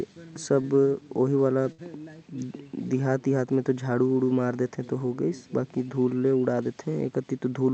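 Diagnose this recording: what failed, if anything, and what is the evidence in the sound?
At 0.61 to 0.67 s the speech briefly hangs. One sound is held about 23 ms too long with a faint buzz or dip, then carries on with nothing skipped. This is a short stall from a late packet at the network and jitter-buffer stage. The buffer ran dry, so the receiver stretched the last sound until the packet arrived. Playback then resumed from the same point, about 23 ms later than before.

Around 1.72 to 1.81 s the sound is briefly held and fades, then jumps ahead with roughly 60 ms of speech gone. This is a burst of packet loss on the network. Packets on the Opus call path were lost or arrived too late to play, so the receiver continued and faded the last sound across the gap before resuming further on.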